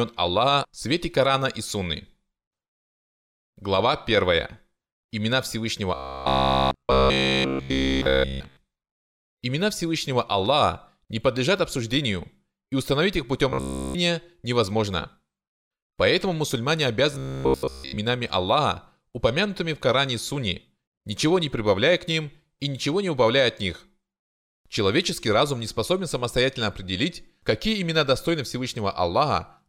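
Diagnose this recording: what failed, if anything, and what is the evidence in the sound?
Robotic sound from repeated short buffers, likely at the driver or buffer stage. At 5.95 to 8.57 s, 13.50 to 13.96 s and 17.12 to 17.98 s, the speech becomes a rigid 66.7 Hz buzz. That fits one 15 ms block replayed almost continuously while fresh audio is skipped.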